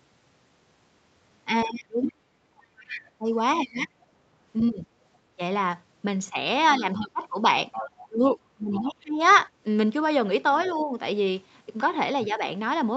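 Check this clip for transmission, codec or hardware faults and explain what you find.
Two echo-canceller faults recur across the speech; the call path itself shows only its normal ceiling near 8 kHz, consistent with Opus.

Speech suppressed in double talk, 1.65 to 4.86 s, 6.79 to 9.2 s and briefly 10.67 to 10.94 s. The talker's level dips deeply, then moderately, then slightly, likely because suppression engaged during overlap. The waveform shows notched envelope gaps, and the spectrogram shows harmonics fading in patches.

Other side's voice leaking through, 2.03 to 4.64 s, 6.62 to 9.38 s and faintly 10.54 to 10.71 s. A second voice sits roughly 10 dB under the talker in the first two stretches and about 25 dB under in the last, likely residual loudspeaker echo. On the spectrogram it appears as a weaker, interleaved harmonic trace.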